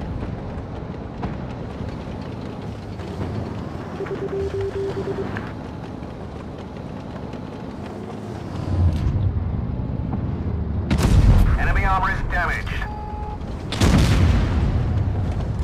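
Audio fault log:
Nothing stood out on listening, and there is nothing to log for this clip.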